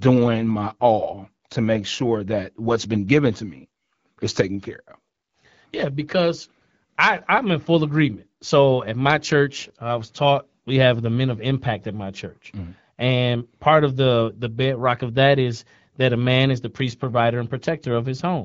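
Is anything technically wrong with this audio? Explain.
No, nothing here stands out as a problem: it's speech carried over the AMR wideband (HD Voice) codec at 12.65 kbit/s, the kind of HD Voice call audio you'd expect, with only light coding effects that are normal for that rate.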